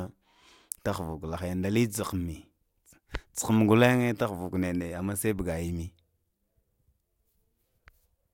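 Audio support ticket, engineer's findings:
No audible faults found in this speech recording.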